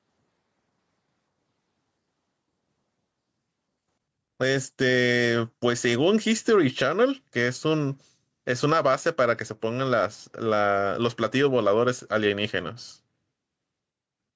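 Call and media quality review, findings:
Gain pumping, throughout the speech. Gain swings by around 5 dB. Loud and soft passages sit unnaturally close in level, so the sound is squashed. Likely cause: input gain set far too high, with a fast limiter or compressor clamping down on each peak and releasing in the gaps. Call microphone processing trims the lowest bass and nothing reaches above 8 kHz; this is expected.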